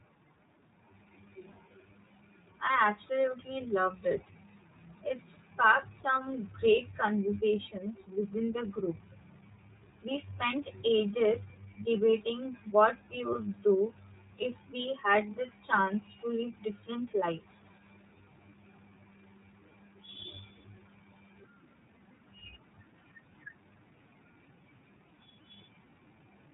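From start to finish the speech carries iLBC codec damage. Nothing above 3.8 kHz survives, and each frame's excitation is coded independently, giving a plainly audible rough, slightly synthetic texture. The coarse framing fits iLBC's 30 ms mode, which runs at about 13.33 kbps.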